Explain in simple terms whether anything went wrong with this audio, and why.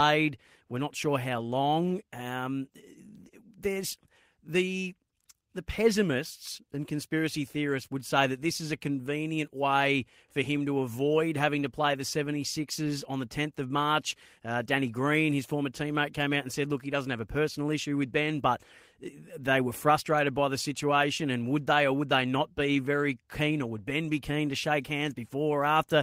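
Nothing went wrong here.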